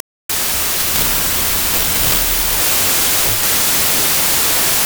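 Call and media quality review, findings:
Wrong sample width, whole clip: loud noise with speech buried underneath, slowed to 0.667x and pitched down. Reader format mismatch: packed 24-bit data read as 16-bit, splitting samples across byte boundaries. Rate mismatch alone would stay clean; byte-swap keeps speed.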